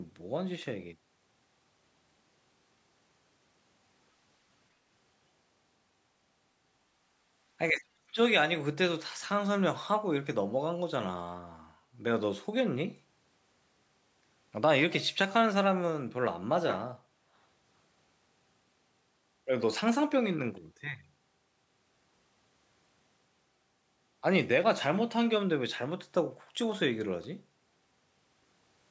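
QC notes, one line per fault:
7.71–8.19 s, speech suppressed in double talk: speech ducks hard for about half a second, around 35 dB down at worst, likely the echo canceller clamping down while both ends talked.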